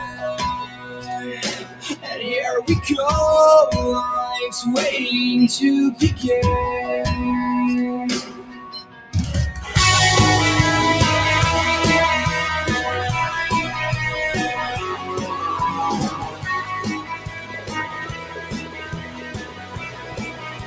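Across the whole clip the level pumps and flutters, with held sounds and tails sagging while attacks punch through, a swing of around 15 dB. That is a noise suppressor applied to music or sounds: a speech-tuned noise reducer left in the chain treats steady tones, ambience and decay as noise and keeps pulling them down, so sustained material thins and wobbles. The call's microphone processing sits alongside it, with nothing above 8 kHz.

At 0.00–0.23 s, 0.64–2.07 s, 8.22–9.14 s, 14.95–15.39 s, 16.09–16.47 s and 16.98 s to the end, the sound sinks further and decays are cut short. The drops are about 9, 11, 12, 8, 11 and 12 dB respectively. Each is sound cut by the noise suppressor: the reducer judged these stretches to be noise and attenuated them harder than the rest. The final stretch, nearly four seconds long, is the longest.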